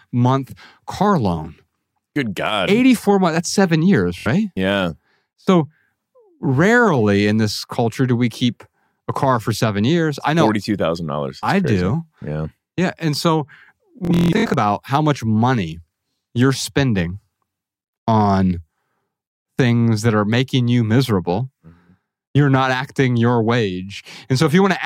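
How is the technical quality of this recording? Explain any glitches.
The speech is marred by two Bluetooth stutters. At 4.18 s, after "months that's seven years", and 14.05–14.57 s, before "how much money you're", late packets made the receiver replay short slices, giving a buzzy machine-gun repeat. The first lasts about 70 ms. The second scatters roughly 370 ms of repeats, the longest run about 160 ms, before the speech resumes further on.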